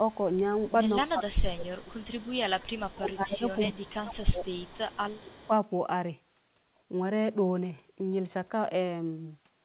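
From 0.08 to 0.73 s a faint copy of the speech trails it by 229 ms, about 30 dB down. This is an echo leak, likely from a far-end loudspeaker whose echo canceller let part of the pickup return. It comes back at about 25 dB down from 1.06 to 3.92 s and from 4.45 to 5.51 s. The fixed 229 ms lag marks it as returned audio rather than room reverberation.

Overlapping the later stretches, the main speech itself sinks, by roughly 20 dB from 1.02 to 2.08 s and about 25 dB from 2.62 to 4.44 s and 5.22 to 5.50 s. This is speech suppressed in double talk, likely the canceller ducking both sides at once. Unlike the echo, which adds sound, this removes it. Throughout, the band stops at 4 kHz, consistent with a 64 kbps G.711 A-law call path.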